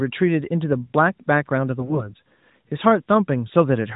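From 1.79 to 2.14 s you get AMR bit errors: roughly one bit in twenty flipped across what sounds like nine frames, so the speech keeps its pitch and level but turns hoarse and gargly.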